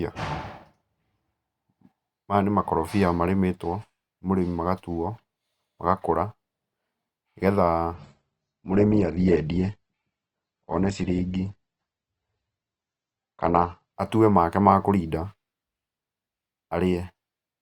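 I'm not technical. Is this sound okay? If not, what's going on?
No. From about 7.94 to 13.94 seconds this is an adaptive stream at a lower bitrate: the connection slowed, so the player switched to a much more heavily squeezed version of the speech for six seconds. You hear the crisp top end vanish, with nothing above roughly 8.2 kHz, and the voice turns duller. The change happens instantly, without any gap or dropout, and clarity returns just as suddenly once the connection recovers.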